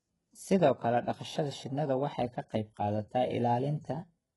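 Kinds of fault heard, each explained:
HE-AAC compression: heavily damaged treble with gritty, metallic s sounds, likely from spectral band replication at a very low bitrate near 12 kbps. On a spectrogram, the upper bands look like blurred copies of the lower ones, and everything above 11.4 kHz is empty.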